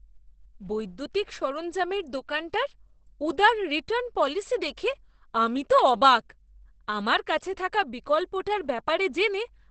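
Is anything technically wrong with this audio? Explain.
Yes. The whole clip is muffled and hoarse with nothing above 8.5 kHz, likely Opus compression in its speech mode at a low bitrate, around 12 kbps.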